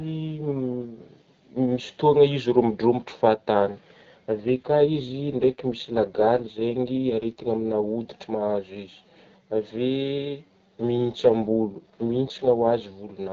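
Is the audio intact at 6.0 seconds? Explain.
No, 6.0 s sits inside an AMR rate drop from 4.40 to 7.84 s. The speech turns rough and synthetic, which fits the codec rate being cut from 12.65 to about 6.6 kbit/s on a weak radio link.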